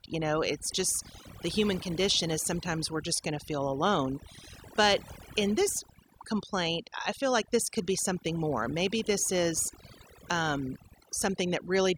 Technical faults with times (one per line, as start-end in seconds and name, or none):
0.00-11.98 overdone noise removal